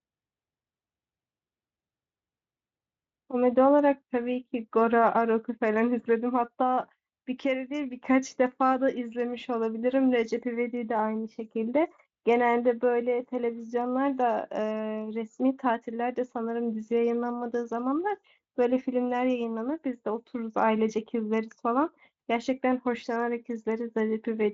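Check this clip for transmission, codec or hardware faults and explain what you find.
No transmission, codec or hardware faults found; the speech runs through a Speex path at a high enough setting that coding damage is faint at most, with the band ending near 7.7 kHz as that path's bandwidth implies.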